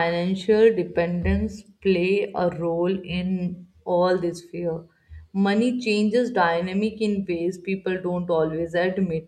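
No audible faults occur anywhere in this recording.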